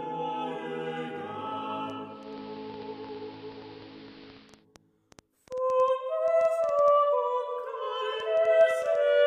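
Something in the chain, likely interference from nearby equipment or a faulty connection, injects a train of clicks from 1.90 s to 8.96 s, about six per second at an uneven pace, some forty in all, ticking and popping slightly above the sound's own level. From 2.03 s to 4.66 s, a hybrid receiver loses its digital stream and blends to the station's AM analogue broadcast over about 331 ms. The audio then drops about 2 dB in level and carries hiss well below the signal until the blend back.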